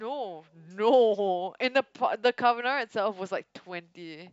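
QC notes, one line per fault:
No faults to note.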